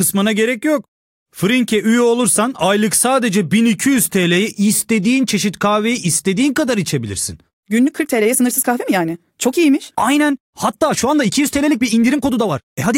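From 7.76 s to the end, a time-stretched section: software likely sped the speech up about 1.39 times while holding pitch, so delivery turns abruptly rushed.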